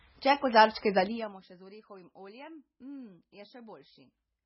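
The speech has been squeezed through heavy lossy encoding, likely MP3 compression at a very low bitrate around 16 kbps. The encoder discards everything above 5.6 kHz and lets weak detail flicker between frames, so the whole clip sounds dull, watery and swirly, with smeared consonant attacks.

From 1.0 to 1.4 s, a level drop of roughly 20 dB is applied in 2 dB jumps, about 30 per second, with no smoothing between them. Each jump clicks, giving zipper noise, a rapid ticking buzz riding on the speech as it fades.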